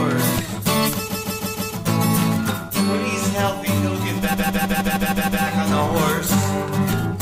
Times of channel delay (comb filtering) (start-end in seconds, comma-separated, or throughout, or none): 2.70-5.71